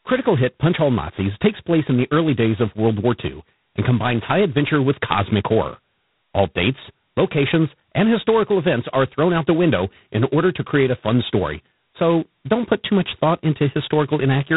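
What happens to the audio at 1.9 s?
At 1.9 s the speech carries G.726 ADPCM damage that runs through the whole clip. The sound is heavily coarsened, which fits the 16 kbit/s mode, where each sample keeps only two bits of difference from an adaptive prediction. The resulting quantisation error gives a harsh, rasping hiss that rises and falls with the speech level. On a spectrogram, energy stops sharply near 3.9 kHz, with grainy noise filling the band below. The waveform looks fuzzy and rough-edged.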